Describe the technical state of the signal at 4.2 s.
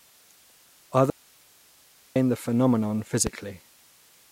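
At 4.2 s the speech signal is intact, with no audible fault at that moment.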